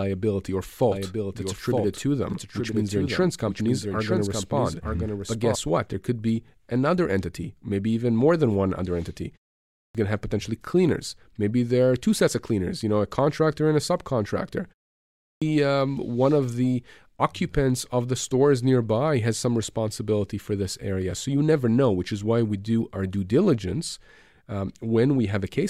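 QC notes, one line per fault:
0.92–5.56 s, doubled audio track: a second full-band copy of the speech runs roughly a second behind the original, around 5 dB quieter, so two overlapping streams are heard at once. The copy carries no decay or added room colour and cuts in and out abruptly at the range edges, which sets it apart from an echo or reverb tail. The likely cause is the same signal being captured again over a slower path.
9.62–9.95 s and 15.09–15.42 s, clipped start after a pause: after pauses of about 0.33 s and 0.44 s, the first 0.33 s of each returning phrase is missing, so speech bursts abruptly out of silence without its opening sounds. The output device drops into a sleep state during the gap and needs that time to wake before it plays again.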